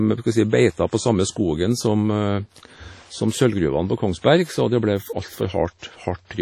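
Speech throughout sounds ringing and washy, with a hiss that swells and fades along with it and nothing above 17.7 kHz; the likely cause is heavy WMA compression at a low bitrate, which fits roughly 32 kbps. A brief hiss smears in ahead of two sharp attacks, at 4.19 to 4.24 s and 5.79 to 5.82 s, arriving 53 ms and 37 ms early. This is pre-echo: the codec's quantisation noise, sized for the loud onset, spreads across its whole transform block and fills the quiet moment before it.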